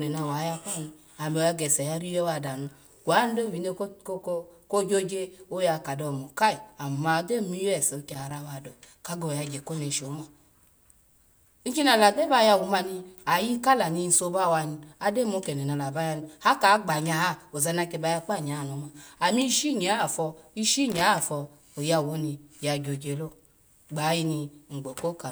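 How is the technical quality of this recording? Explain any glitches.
The speech is marred by loose connector crackle in two bursts, from 8.12 to 8.34 s and from 20.92 to 21.02 s. A worn or dirty contact intermittently breaks the signal path, chopping the audio, heard as brief, irregular scratchy crackle.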